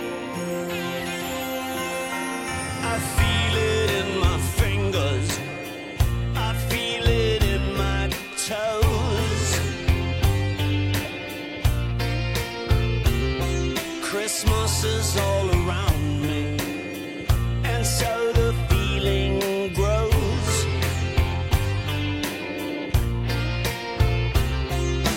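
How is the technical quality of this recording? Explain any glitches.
Nothing stood out on listening, and there are no glitches to explain.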